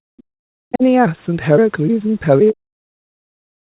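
From 0.00 to 0.09 s the speech drops sharply, by around 40 dB. This is speech suppressed in double talk. Both ends were likely talking at once. The echo canceller could not tell the local talker from the loudspeaker echo, so it turned everything down.

Between 0.17 and 0.23 s a faint second voice slips through, roughly 35 dB below the talker. This is the other side's voice leaking through. The echo canceller likely left a scrap of the loudspeaker signal in the microphone.

From 0.37 to 0.44 s the room sound falls away by about 39 dB for roughly 70 ms. This is background gated by the echo canceller. It clamped the microphone hard while the loudspeaker played, then let go.

Speech suppressed in double talk returns at 0.71 to 0.84 s, dipping by around 20 dB. From 2.53 s to the end it comes back much deeper, near 40 dB, and the talker stays pushed down.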